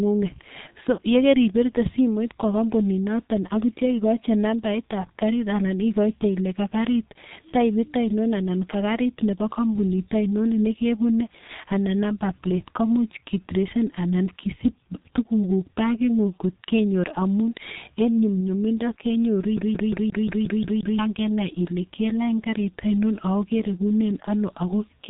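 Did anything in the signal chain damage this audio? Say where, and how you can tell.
Yes. A G.723.1 codec stage runs throughout the clip. The speech is heavily muffled and hoarse, consonants smear, and nothing reaches above 3.8 kHz. That fits a low-rate telephony coder near 6 kbit/s that models the voice coarsely in 30 ms frames.

A CD stuck on one turn shows up at playback from 19.57 to 20.99 s. A 177 ms slice repeats eight times in an even, rapid stutter, with a brief mute at each jump. The laser keeps skipping back one track at the same damaged spot.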